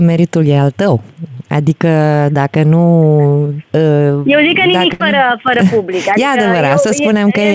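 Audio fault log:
1.38 to 1.41 s, short concealed packet loss: a quick smear where 20 ms arrived too late, so the decoder extended the previous sound for 14 ms, then blended back.
4.93 to 5.02 s, burst of packet loss: 60 ms went missing in a row. The receiver held and faded the last sound for 64 ms, then the audio jumps ahead.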